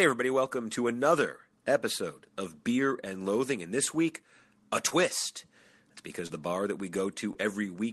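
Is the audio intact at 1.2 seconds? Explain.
No, there's a brief underrun with held sample at 1.18 s, between "everybody welcome to" and "episode of". The output buffer ran dry for about 0.73 ms, so the converter just froze on its last value. The waveform flatlines while that last value is held. A fraction of a millisecond of live audio was lost rather than paused.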